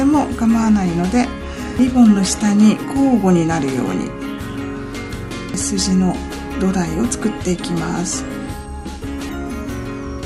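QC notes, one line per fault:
1.79, 5.54 and 9.29 s, audio missing between chunks: about a third of a second vanishes at each point and the two sides butt together without silence. The steady spacing likely reflects 4 s chunks, unlike packet dropouts, which leave gaps at irregular times.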